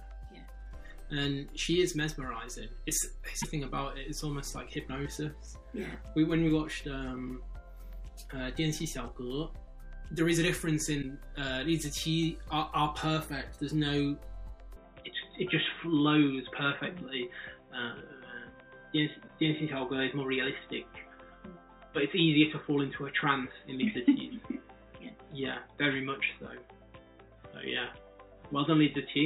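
At 3.41 to 3.44 s and again at 11.01 to 11.04 s, the audio skips forward by about one 26.1 ms frame. This is likely a broken MP3 bit reservoir: after frames were lost, the next frame fetched its borrowed data from the wrong bytes, decoding as garbage.

From 14.76 s to the end, the sound turns abruptly dull and boxy with no gap at the change. Nothing remains above 3.8 kHz, the level shifts by a few decibels, and a faint new noise floor sits far beneath the signal. The likely cause is an input switched to a poorer device with a narrower band.

At 19.27 to 19.30 s, the same one-frame jump returns, again from the broken bit reservoir.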